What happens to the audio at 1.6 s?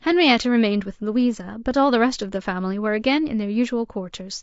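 At 1.6 s the speech carries the same damage as everywhere else in the clip, likely from low-delay AAC compression at a low bitrate, around 32 kbps. Its short frames resolve pitch harmonics poorly, so the voice sounds plainly rough and grainy, with noise filling between harmonics.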